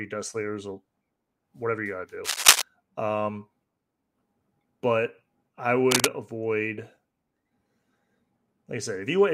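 Scratching, rustling bursts cover the speech from 2.24 to 2.62 s after "whatever you got to", about 10 dB above it, and from 5.91 to 6.07 s after "but I", about 5 dB above. This cable scratch noise likely comes from a worn cable or connector shifting, its contact resistance jumping erratically.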